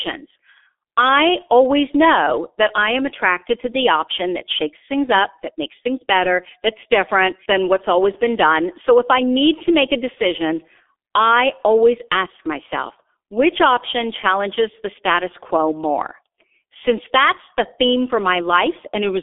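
From start to finish the speech sounds muffled and hoarse, with consonants smeared together and a rough texture under the voice. Nothing reaches above about 3.7 kHz, and the low end thins out below roughly 300 Hz, as on a narrow telephone line. This is heavy G.723.1 codec damage: the coder rebuilds the voice from a coarse model refreshed only once per 30 ms frame, and the level of degradation fits its 6.3 kbit/s mode.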